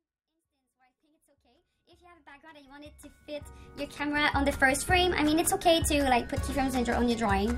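No technical faults are present.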